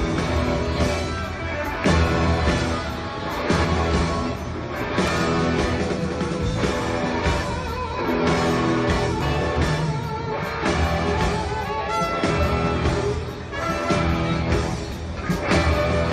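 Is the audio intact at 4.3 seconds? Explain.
Yes, the audio is intact at 4.3 seconds, with no dropout, click, distortion or other fault at that moment.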